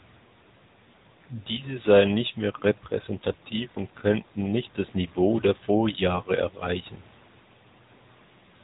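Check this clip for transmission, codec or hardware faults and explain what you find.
The speech has passed through the AMR narrowband mobile codec (AMR-NB), and the damage is plainly audible across the whole clip. The link runs at an 8 kHz sampling rate, and nothing above about 3.8 kHz gets through. The codec models the vocal tract and drives it with a few pulses per 5 ms slice of each 20 ms frame, at a mid-range mode that fits roughly 10 kbps. The voice sounds boxed-in and dull, with a buzzy, synthetic edge.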